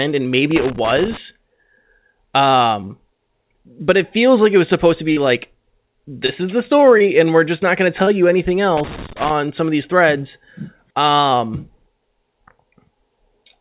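From 0.51 to 1.17 s there is loose connector crackle: a worn or dirty contact keeps making and breaking, chopping the signal into an irregular burst of scratchy crackle over the speech, all within the narrow band below 4 kHz of what sounds like a G.711 call path.

Short concealed packet loss follows at 5.12 s (after "it was supposed to"), 6.26 s, 6.98 s and 8.04 s (between "just not going to" and "you anything"). Each gap, about 40 ms at the first and about 20 ms at the others, was patched by extending the preceding sound, which is heard as a brief smear or wobble.

A second burst of loose connector crackle runs from 8.77 to 9.30 s, between "you anything" and "some of these threads", with the same intermittent contact producing ragged scratching.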